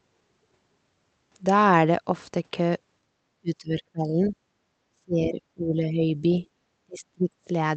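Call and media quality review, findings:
Background gated by the echo canceller, 3.03–3.13 s: room sound dips about 6 dB for roughly 100 ms. Canceller clamps mic gain while far-end loudspeaker plays, releases once playback stops. Brief, shallow hole in ambience.

Speech suppressed in double talk, 3.41–4.35 s, 4.92–6.45 s, 6.86–7.5 s: talker's speech dips by around 30 dB, for under a second up to a second per span. Likely the echo canceller mistaking near-end speech for echo during overlap and attenuating both.

Other side's voice leaking through, 4.25–4.32 s: faint second voice, around 20 dB below the talker, brief scrap. Likely residual loudspeaker echo the canceller failed to subtract, surfacing at the tail of the first suppressed span.

Call path itself carries the usual codec colouring, with the top end limited in the way a 24 kbps Opus stream at 8 kHz bandwidth would produce.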